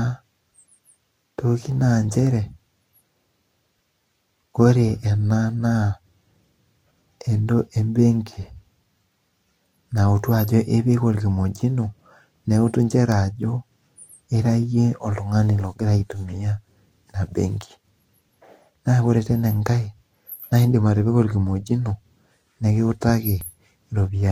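At 8.43, 13.43 and 23.41 s the sound skips a few milliseconds without silence, likely audio missing between 5-second chunks; unlike dropouts, no gap is heard.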